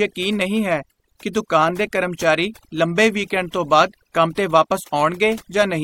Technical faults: overdone noise removal

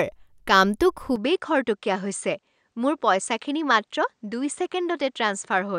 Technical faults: input switched to a poorer device

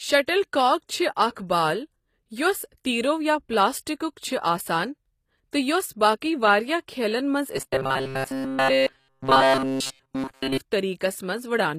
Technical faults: HE-AAC compression; robotic sound from repeated short buffers

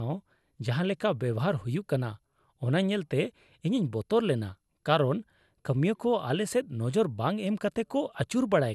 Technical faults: generation loss

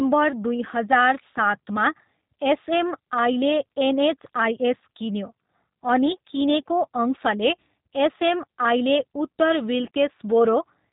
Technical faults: G.729 codec

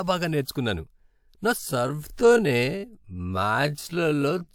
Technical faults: time-stretched section

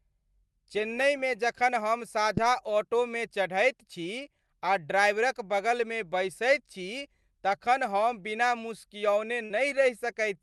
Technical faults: short concealed packet loss; burst of packet loss

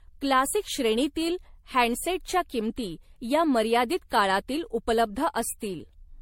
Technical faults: generation loss

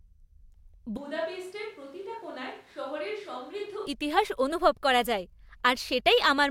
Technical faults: switch to a distant microphone; drift correction step

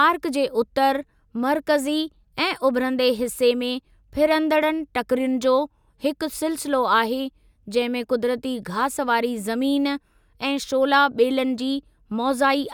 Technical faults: none

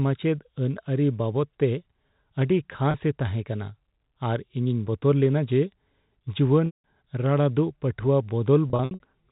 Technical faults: packet loss with pitch repetition

